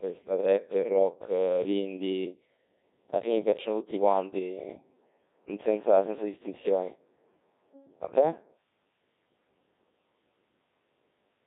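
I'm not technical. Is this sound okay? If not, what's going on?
No. The speech was passed through a Codec 2 vocoder, a very low-data system built for digital radio. Instead of sending the actual sound, it sends a rough description of the voice (its pitch, loudness and tone colour), and the receiving end rebuilds the voice from simple tones. Here the damage is heavy. From start to finish the voice sounds robotic and buzzy, squeezed into a thin, telephone-like range.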